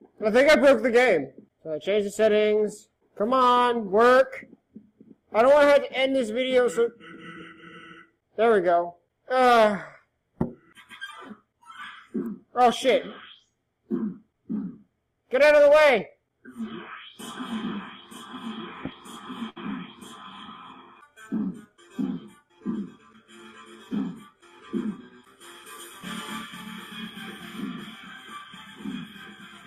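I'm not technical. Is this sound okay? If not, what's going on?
No. At about 19.49 to 19.58 seconds there's a short glitch: the sound briefly smears into a held buzz or hiss that fades, then jumps ahead as if a tiny piece were skipped. This is a burst of packet loss. Several chunks of audio got lost or arrived too late on their way over the network, so the player stretched out the last bit it had for about 65 ms. When the audio picked up again, roughly 60 ms was gone for good.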